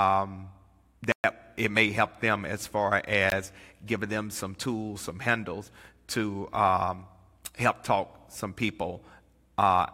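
Twice in this speech, a block of samples in the output was replaced by zeros, a block of digital silence with hard edges and no fade. From 1.12 to 1.24 s, just before "it may help them", a 120 ms hole opens. At 3.30 s, between "help them as far" and "giving them some tools", a 19 ms block leaves a short hole.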